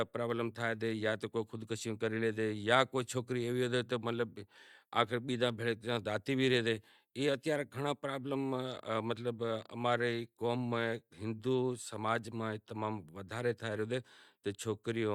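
No technical faults are audible anywhere in the speech recording.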